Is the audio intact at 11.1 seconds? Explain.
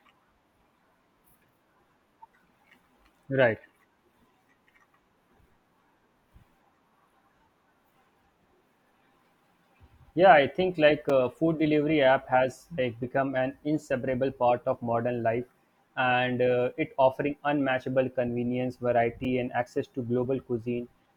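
No. At 11.1 s there is a block of digital silence about 5 ms long. The speech drops abruptly to silence and resumes with no fade. This short hole is heard as a tick.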